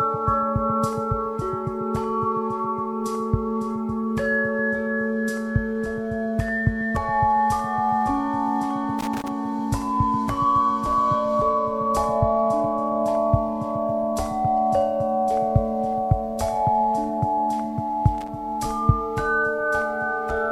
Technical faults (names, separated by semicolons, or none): loose connector crackle